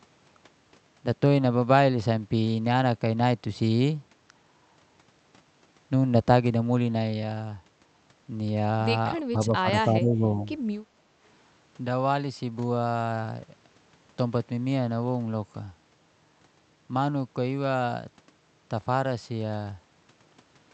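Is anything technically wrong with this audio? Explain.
Yes. From 9.18 to 9.68 s and again from 9.88 to 10.38 s the speech suddenly drops, by roughly 25 dB in the first dip and about 15 dB in the second. This is likely speech suppressed in double talk: with both sides talking at once, the echo canceller treated this talker as loudspeaker echo and turned it down.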